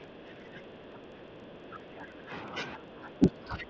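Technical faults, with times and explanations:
Throughout: filter restarted on every block. A filter loses its state at each block boundary and starts again from silence. The result is a small transient every block, heard as a buzz at 25 Hz. That rate fits 40 ms blocks, and the buzz gets louder and softer with the speech.
0.0–2.55 s and 2.76–3.69 s: speech suppressed in double talk. The speech ducks and thins out in patches, by about 10 dB at worst in the first stretch and about 15 dB in the second. The likely cause is an echo canceller that can't tell the talker from loudspeaker echo while the other side is speaking, so it turns both down. The band stops around 7 kHz, which is what a wideband call codec passes.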